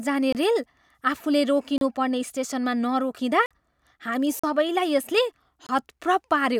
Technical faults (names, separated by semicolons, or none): block of digital silence